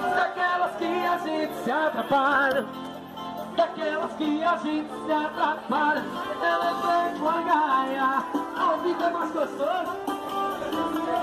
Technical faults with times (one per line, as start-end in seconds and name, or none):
none